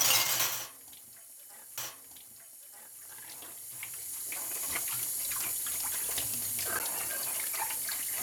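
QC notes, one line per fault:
1.77 s and 6.79 s, CD skip: a tick and a brief mute, a few milliseconds then about 10 ms, as the laser jumps a track turn; unlike a dropout, the sound resumes elsewhere.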